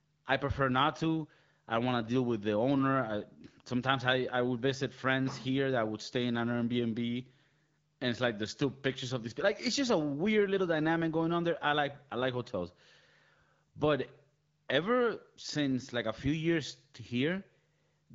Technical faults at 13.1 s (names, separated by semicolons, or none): none